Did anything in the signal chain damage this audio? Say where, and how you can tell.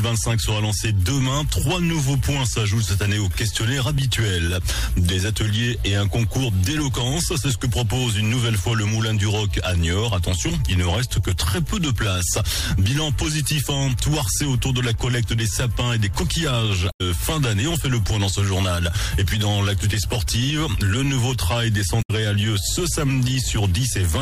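Yes, there's damaged data in the compressed stream, so it's a codec or storage problem. Two short glitches, at 16.89 to 17.01 s and 21.98 to 22.11 s, each about 0.12 s. Bad bytes made the decoder misread frames and lose sync until it found the next valid header.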